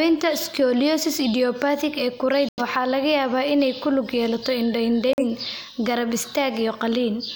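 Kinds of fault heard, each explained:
Corrupt frame muted, at 2.49 to 2.62 s and again at 5.09 to 5.25 s: damaged data inside compressed frames made the decoder reject them, and the player filled each rejected frame with silence. The speech drops out abruptly for about 0.13 s and then 0.15 s, holes that fit two and three lost frames respectively, and the speech resumes on schedule afterwards because the muted frames still occupy their full time.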